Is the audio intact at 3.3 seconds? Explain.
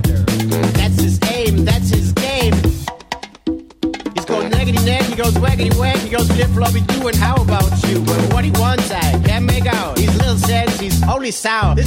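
Yes, the audio is intact at 3.3 seconds, with no fault present at that moment.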